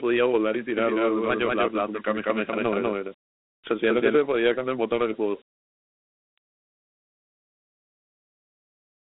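From start to finish the speech carries the marks of Dialogic VOX ADPCM. The sound sits in a telephone band of roughly 200 Hz to 3.7 kHz, and nothing reaches past 3.9 kHz, so a spectrogram shows a hard ceiling with empty space above it. The 32 kbps rate fits 4-bit samples at 8,000 a second. Each sample is coded as a coarse step from its prediction, which leaves a plainly audible gritty hiss riding on the speech and a waveform speckled with quantisation roughness.

From 0.77 s to 4.15 s a doubled audio track appears. A second full-band copy of the speech runs about a fifth of a second behind the first, at roughly the same loudness. Likely cause: the signal was captured twice, once by a slower path. It has no decay and no added room colour. It sounds like a crisp slapback that smears every syllable. On a spectrogram each pattern repeats, shifted right by that fixed gap. In the waveform the doubled stretch begins and ends abruptly at its edges.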